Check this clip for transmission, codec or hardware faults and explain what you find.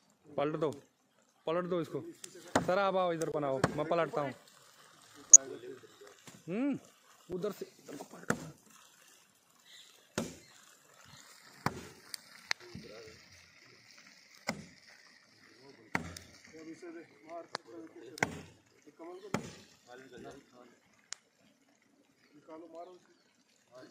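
Three faults are audible: two dropouts and one burst of corrupted broadcast audio.

At 3.32 to 3.34 s and again at 7.32 s, the sound cuts abruptly to nothing and back. These are blocks of digital silence, lasting about 21 ms and 5.8 ms. The output buffer likely went unfilled and was zeroed, and the shorter gap fits a 256-sample buffer.

From 5.20 to 5.36 s, short blips of noise sit over the audio. This is DAB burbling: a small fraction of a percent of bit errors slipped past error correction. Corrupted MP2 data then put brief noise into sub-bands across roughly seven frames.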